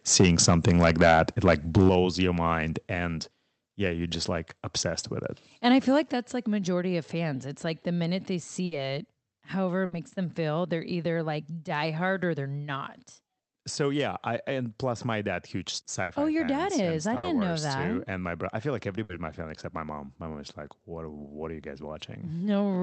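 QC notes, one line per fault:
0.12–1.99 s, microphone overload: the loudest syllables carry a flattened, crackling distortion, likely from input gain set around 9 dB too high so that peaks struck the converter's ceiling. Roughly 2 percent of samples in this stretch have their tops cut off.
1.89, 2.91, 6.03 s, microphone volume stepped down: voice and background drop abruptly by about 7 dB, then about 2 dB after "your mind", then about 6 dB after "I feel" and before "that's like majority of". This is likely the call software cutting device input gain in single steps, the first right at the end of the overloaded stretch.
8.65, 9.85, 16.03, 17.17, 19.03 s, burst of packet loss: each gap is filled for 60 ms by the receiver extending the last sound while fading it, so voiced sound becomes a held buzz and unvoiced sound a decaying hiss. Then 60 ms of audio is skipped, at 9.85 s between "it however it" and "them feel". 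The Opus call path's 8 kHz band limit applies throughout the clip.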